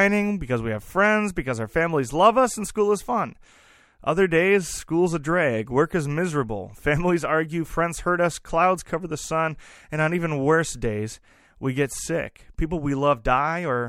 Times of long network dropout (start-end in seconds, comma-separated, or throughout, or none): none